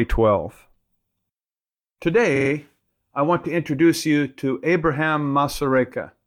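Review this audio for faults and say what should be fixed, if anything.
Repeated frames cause a stutter from 2.35 to 2.49 s. A 46.4 ms block of speech plays three extra times. That block length points to a pair of compressed frames being sent again. The clip grows by 139 ms. Check frame sequence numbers and discard duplicates before decoding.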